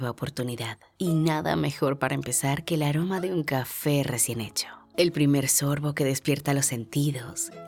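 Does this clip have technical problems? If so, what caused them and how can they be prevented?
No, this clip has no technical problems, so there is nothing to prevent.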